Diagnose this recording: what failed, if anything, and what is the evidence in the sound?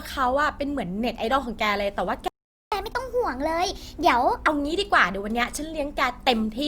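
Playback stage: a playback stall silences the speech from 2.28 to 2.72 s, about 440 ms. The sound resumes where it broke off rather than skipping ahead, so nothing was discarded. The likely cause is a player starved of data or a blocked audio thread.

Directly after the stall comes catch-up at higher speed, from 2.72 to 4.48 s. The speech runs 1.25 times fast and sits roughly four semitones higher, then returns to normal. Because pitch rises with tempo, this is resampling to recover lost time, not a pitch-preserving time-stretch.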